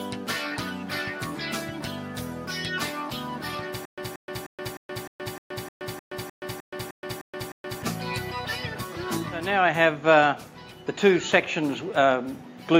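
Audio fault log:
3.85 to 7.82 s, stutter with silent gaps: the same 182 ms fragment plays 13 times, each followed by about 123 ms of silence, so it returns every 305 ms at an even pace. The likely cause is a player or stream stalling, replaying its last fragment at each retry and then running empty. Unlike plain dropouts, the gaps alternate with one repeated burst rather than fresh audio, and whatever should have played during this span is lost.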